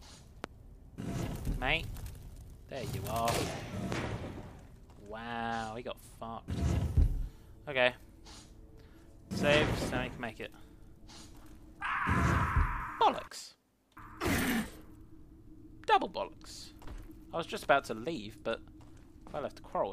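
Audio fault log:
0.44–0.47 s and 3.92–3.95 s, loud pop: two single sharp pops sit on top of the sound, which carries on underneath, each peaking roughly 20 dB above it. The likely cause is a sudden voltage step or spike, such as a plug, switch or static discharge, shaped by the circuitry that follows. On the waveform each shows as a tall, narrow spike lasting about 30 ms. On the spectrogram each is a thin vertical stripe spanning the whole frequency range.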